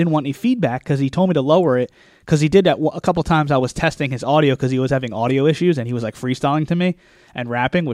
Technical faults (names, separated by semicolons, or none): sample clock jitter